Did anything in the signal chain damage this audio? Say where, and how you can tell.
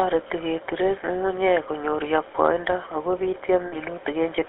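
Yes. The GSM full-rate codec runs throughout the clip. The speech has a plainly audible buzzy, gravelly roughness, and the band is confined to roughly 300 Hz to 3.5 kHz. The codec stage coarsely models the vocal tract over a thinned pulse excitation, which fits the 13 kbps full-rate coder.

Lost GSM frames occur from 3.66 to 3.8 s, also at the codec stage. The voice freezes into a short, rough metallic ring. The decoder reused the last good frame's settings, which fits about 60 ms of missing frames, likely three.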